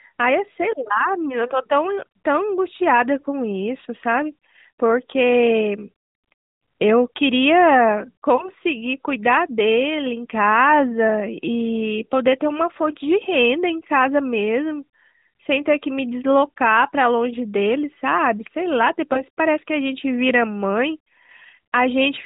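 At 8.36 s and again at 19.14 s, the speech briefly dips or warbles. These are lost AMR speech frames, one 20 ms frame each time. The decoder patched each gap by repeating the last pitch and tract settings at falling gain. Each blemish lasts about a tenth of a second, over the narrowband AMR-NB sound, whose light coding damage fits roughly 12.2 kbps.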